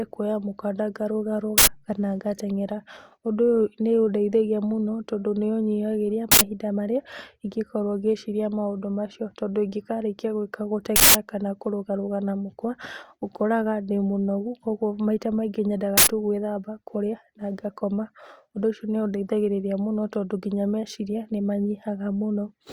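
An uninitialised buffer was sent to the output four times before any speech had been written into it, so whatever stale memory it held played as samples. Each event is a sudden, loud burst of digital noise cutting through the speech: 1.58 to 1.67 s, 6.32 to 6.41 s, and 15.98 to 16.07 s, each about 93 ms, which fits a 4096-sample buffer. At 10.96 to 11.15 s the burst lasts twice as long, about 186 ms, consistent with an 8192-sample buffer.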